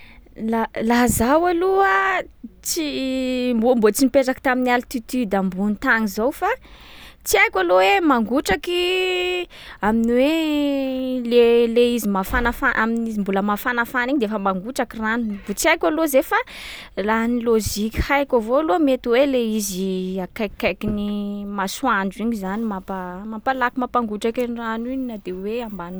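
No technical faults can be heard anywhere in the speech recording. Nothing interrupts or disturbs the audio at any point along its course.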